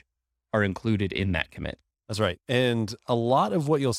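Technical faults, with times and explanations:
No technical faults can be heard in this speech recording. Nothing in the audio stands out as a fault at any point.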